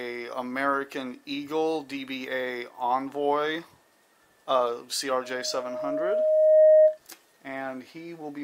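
At 5.23 s a loudspeaker feedback squeal begins. A microphone is hearing the speaker it drives, and at 621 Hz the loop gain climbs past unity, so that tone feeds on itself. It swells over roughly a second and a half to about 15 dB above the rest of the sound, then stops at 6.98 s. A spectrogram shows one bright horizontal line at 621 Hz thickening over time, and the waveform envelope balloons.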